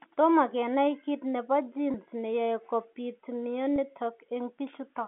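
A speech clip over a phone line, with two brief dropouts from packet loss with pitch repetition, at 1.92 to 1.94 s and 3.76 to 3.78 s. Each gap is about 20 ms, consistent with a single lost packet, and the receiver bridges it by repeating the last pitch period, so you get a tiny held, buzzy blip. Behind it, the G.711 telephone coding keeps the sound within roughly 200 Hz to 3.5 kHz.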